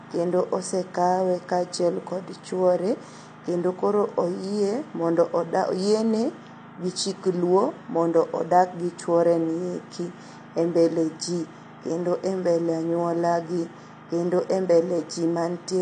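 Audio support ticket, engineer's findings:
AAC compression, entire clip. Speech dull and smeared, with a fizzy, warbling texture on sibilants and sustained sounds. Spectrogram shows a hard ceiling with nothing above 9 kHz. Likely AAC-LC encoder quantising coarsely and dropping spectral lines, consistent with around 32 kbps.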